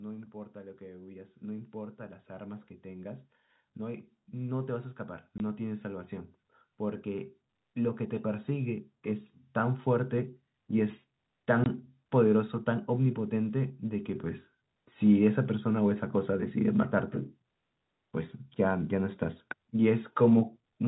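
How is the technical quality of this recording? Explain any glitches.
The recording has two kinds of glitch: a slow rise in loudness across the first half, and two brief hard dropouts.

From 0.33 s to 11.78 s, the speech and the background noise behind it swell together, ending about 17 dB louder than they began. This is automatic gain rising. The gain control judged the input too quiet and kept turning it up gradually. Because it amplifies everything it receives, the background noise climbs in step with the speech instead of staying put underneath it.

At 5.38 to 5.40 s and again at 11.64 to 11.66 s, the speech cuts out for 20 ms. This is packet loss filled with silence. Each gap matches the length of one lost 20 ms packet. The receiver had nothing to play for that slot, so it inserted pure silence and the waveform snapped off and back on. The second dropout lands just before the gain rise levels off. 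The narrow telephone-band character of the sound comes from the G.711 A-law coding the call used.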